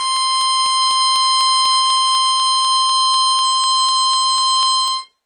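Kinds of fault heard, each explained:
Transcoding between lossy codecs: nothing above 10 kHz, with layered smeary, watery artefacts unlike single-codec blur, likely from an HE-AAC-style chain of successive encodings.
Periodic USB or driver dropouts: about twenty tiny skips, roughly 2 ms each, every 0.248 s from 0.17 to 5.13 s; their even spacing separates them from random clicks.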